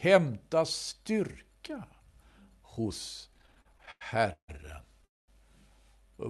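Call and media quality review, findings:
Repeated stalls (stutter), 3.32–4.50 s: audio drags and stutters through fourteen short breaks, longest 156 ms, about 385 ms filled in total, roughly a third of the span. Jitter buffer repeatedly ran dry on late packets; receiver stretched the last sound across each gap.

Call audio freeze, 5.05–5.30 s: audio halts for about 230 ms, nearly all of it near-silent, then resumes where it stopped with nothing lost. Likely packets held in transit, jitter buffer empty, concealment fading quickly to quiet.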